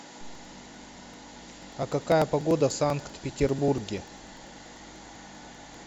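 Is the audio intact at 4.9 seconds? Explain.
No. Periodic USB or driver dropouts run from 0.06 to 5.74 s. Every 0.098 s, about 2 ms of speech is skipped, causing regular ticks.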